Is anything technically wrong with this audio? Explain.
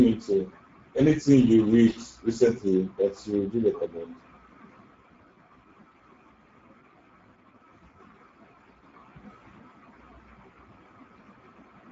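Yes. Throughout the speech, Speex codec damage is plainly audible. With too few bits for the CELP excitation, which fits a rate near 10 kbps, voicing turns hoarse and noisy. Nothing exists above 7.7 kHz, and the top band is a shaped noise fill rather than a clean low-pass.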